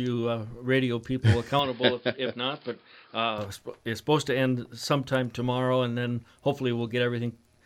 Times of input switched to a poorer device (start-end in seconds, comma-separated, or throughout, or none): 1.59-3.38